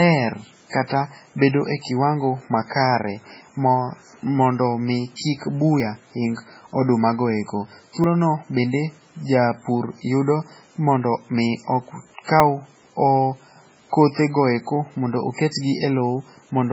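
Throughout the speech, the sound is watery and swirly, and the treble is cut. Weak detail flickers in and out, and consonant attacks smear. The likely cause is heavy MP3 compression, with damage that points to a very low bitrate, around 16 kbps.

From 5.16 to 5.19 s, a short hiss of about 34 ms comes before a sharp attack. This is pre-echo. The codec spread its quantisation noise across the whole block, so noise meant for the loud onset leaks into the quiet moment before it.

At 5.8 s, just before "ing odumagoeko", at 8.04 s, just after "ing odumagoeko", and at 12.4 s, there is a jump in the speech. No silence is heard. About 40, 70 and 40 ms of audio are skipped. The likely cause is a dropped buffer (overrun), where samples were overwritten before being read.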